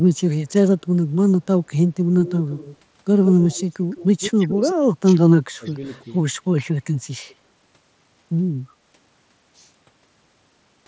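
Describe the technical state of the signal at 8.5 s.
At 8.5 s the speech signal is intact, with no fault present, only the call's microphone processing and the mSBC Bluetooth headset link carrying it as they normally do, which keeps the band below 8 kHz.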